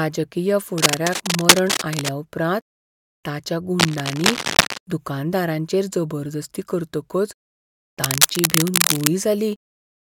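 Bursts of cable scratch noise cross the speech three times. The first runs from 0.78 to 2.14 s. The second runs from 3.79 to 4.78 s, just before "दुकानदारांचेर जबरदस्ती करतकच". The third runs from 8.04 to 9.08 s. Each is a dense, uneven rustling. The first two sit at about the level of the speech, and the last is a little louder. The likely cause is a worn cable or connector being moved, so its contact resistance jumps rapidly.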